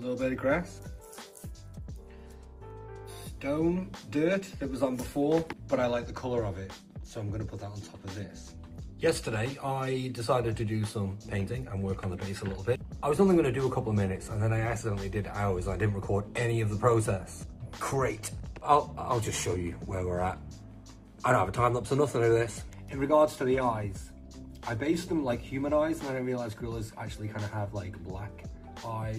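Nothing stood out on listening; no technical problem could be heard anywhere in the audio.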